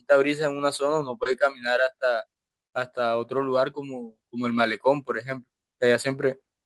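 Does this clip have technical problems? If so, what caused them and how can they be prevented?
Yes. Short concealed packet loss at 1.23 to 1.33 s: 20 ms of speech arrived too late, so the decoder extended the preceding sound and blended back, leaving a brief smear. A larger jitter buffer with forward error correction prevents this.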